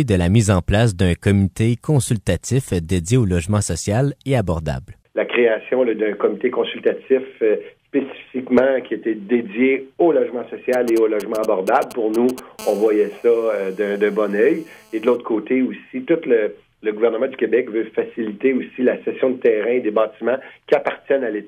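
From 10.73 to 12.40 s a galloping dit-dit-dit of brief 217 Hz buzzes, roughly 15 dB below the sound, marks GSM signalling bursts: a nearby 2G phone's radio pulses rectified by the audio circuit. From 12.59 to 15.16 s a steady, raspy 217 Hz buzz rich in harmonics sits about 26 dB below the sound. This GSM phone buzz comes from a nearby 2G phone transmitting in bursts 217 times a second during a call.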